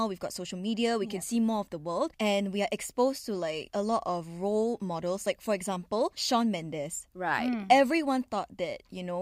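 Nothing technical goes wrong anywhere in this bit of speech, so there's no fault to walk through.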